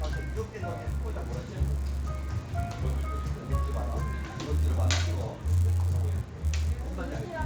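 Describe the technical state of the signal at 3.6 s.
At 3.6 s the audio carries a resampler restarted on every block, a fault present across the whole clip. Each 10 ms block is converted in isolation, which points to an upsampling from 16 kHz to 48 kHz, leaving a small error at every edge and a 100 Hz buzz wherever signal is present.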